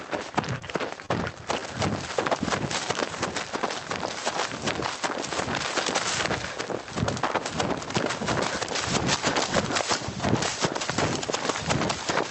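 Everyday sounds in this recording have a squeezed, breathing quality: the level swings by a few decibels, so loud and soft events sit unnaturally close in level. That is gain pumping, and the likely cause is input gain set far too high, with a fast limiter or compressor clamping down on every peak and releasing in between. Near the start there are two brief hitches, from 0.59 to 0.64 s and from 1.06 to 1.12 s, where the sound hangs on for a moment with a faint buzz or dip before carrying on from where it left off. Each is a short stall from a late packet. The jitter buffer ran dry, so the receiver stretched the last bit of audio, about 16 ms the first time and 30 ms the second, until the data turned up, and nothing was lost. The call path shows as a top end that stops around 8 kHz, with coding texture consistent with Opus at roughly 32 kbps.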